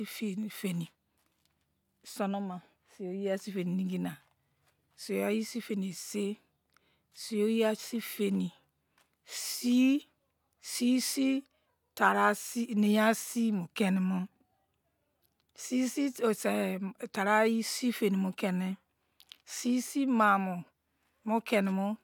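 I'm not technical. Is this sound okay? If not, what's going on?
Yes, the recording sounds fine, with no problems to hear.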